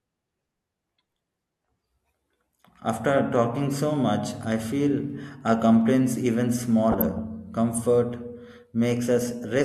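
At 5.81 s, just after "much I feel our", a handful of samples, well under a tenth of a millisecond, were likely lost from the stream. The waveform jumps straight to a later value, heard as one sharp click of dropped samples rather than any gap.

From 6.92 to 7.20 s, weak reception let a small fraction of bit errors past the error correction into the MP2 data. Corrupted samples and scale factors throw individual sub-bands up and down frame by frame, so DAB burbling sits over the speech as short blips of noise.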